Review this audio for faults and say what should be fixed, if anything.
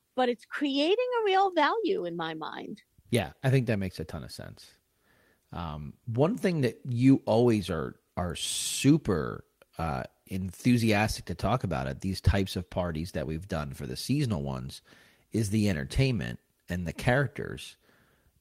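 At 1.41 to 1.47 s, just before "value in my mind", there is a lost packet rebuilt from error correction. About 40 ms of speech sounds rougher and noisier but has no gap, which fits two lost 20 ms packets replaced by the low-bitrate copies carried in the following packets. To prevent it, reduce packet loss on the network path, for example with a more stable connection, QoS prioritisation or a larger jitter buffer.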